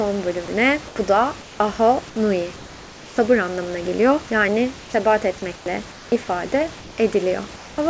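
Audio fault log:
0.46–0.48 s, sound dropped by the voice detector: a brief stretch of speech gives way to steady noise, likely because the sender's detector mistook it for background and stopped sending.
0.46–1.60, 2.56–3.18, 4.80–4.94, 5.56–6.12, 6.78–6.98 and 7.56–7.78 s, comfort noise in place of the background: pauses become flat, featureless hiss, 2 to 5 dB quieter in four of them, likely synthetic fill during discontinuous transmission; the second ends before "anlamına geliyor".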